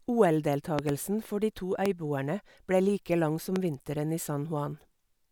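Loud pops break into the speech three times: a double pop between 0.79 and 0.91 s, then single pops at 1.86–1.88 s and 3.56–3.58 s. The first two peak around 20 dB above the speech and the last around 15 dB, with the speech continuing underneath. A sudden electrical step or pulse, likely from a switch, connector or static discharge, reached the signal path. On a waveform each pop is a tall, narrow spike. On a spectrogram it is a thin, bright vertical stripe across all frequencies.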